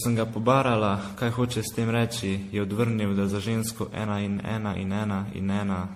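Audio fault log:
Throughout, generation loss: the speech sounds swirly, hollow and smeared, with a watery, metallic shimmer and consonant onsets blurred soft. Nothing is present above 15.3 kHz. This is more degraded than a single MP3 pass at 64 kbit/s would leave, which points to repeated decoding and re-encoding, likely something like fifteen generations. Each pass quantises on a shifted frame grid, so the noise and the spectral holes pile up.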